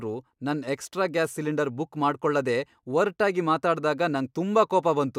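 Speech recording, with no technical faults to report.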